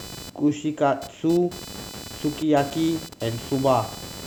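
Computer activity noise runs through the whole recording: changing load in the computer disturbs the ground shared with the audio circuit. It adds a buzzy, chirping whine pulsing around 500 times a second, roughly 15 dB below the speech, shifting with the machine's activity rather than the talking.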